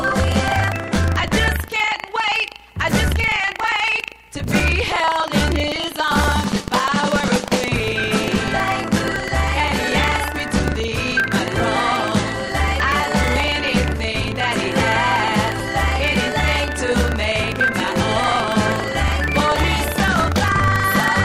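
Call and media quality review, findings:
Buffer tearing, throughout: steady robotic buzz at 25 Hz, present only with signal, which fits a 40 ms period. Write/read pointers slipped; a small slice of each period replays audio about a tenth of a second old. Stale audio, not silent gaps as in underruns.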